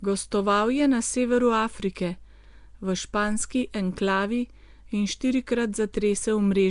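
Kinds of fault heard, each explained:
Nellymoser compression: rough, hissy, underwater-sounding speech with nothing above about 10.6 kHz, likely the old Flash mic codec starving weak bands and filling them with noise.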